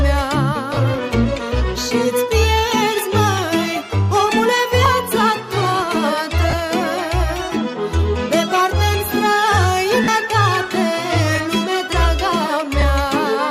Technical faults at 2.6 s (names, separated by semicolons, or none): none